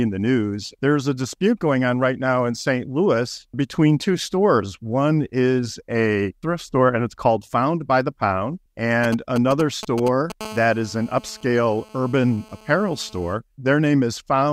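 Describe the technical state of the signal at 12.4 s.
A hard, raspy buzz at 217 Hz, rich in harmonics and sitting about 22 dB below the signal, runs steadily from 10.41 to 13.34 s. This is GSM phone buzz: a nearby phone on a call sends radio bursts that the audio circuitry rectifies.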